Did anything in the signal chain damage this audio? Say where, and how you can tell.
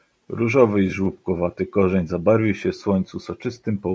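No, the chain did no damage: the only processing heard is ordinary call microphone handling, which trims the lowest bass and leaves nothing above 8 kHz, as that stage normally does.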